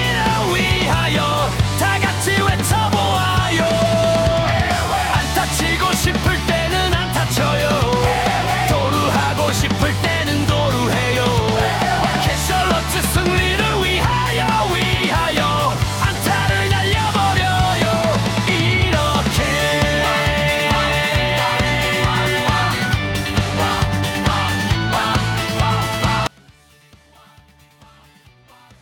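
From 26.27 s to the end, the level collapses by about 30 dB, likely one channel inverted, so the shared centre content cancels on summing. A spectrogram shows energy dropping abruptly across the band; the waveform shrinks sharply.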